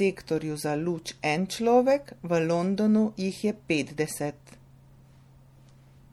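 Speech, likely passed through MP3 compression at a low bitrate fitting 64 kbps, so throughout s sounds turn watery and swirly.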